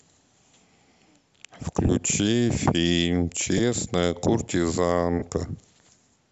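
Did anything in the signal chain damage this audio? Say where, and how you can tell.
Yes. Lost LE Audio frames on the Bluetooth link cause three brief smeared dropouts in the speech: 1.87 to 1.89 s (about 20 ms), 3.58 to 3.60 s (about 10 ms) and 5.19 to 5.22 s (about 30 ms), which fits two, one and three 10 ms frames. At each gap the decoder's concealment repeats the last spectrum with randomised phase, so the speech turns briefly noisy instead of cutting out. The light grain on the speech is likely from the LC3 codec itself.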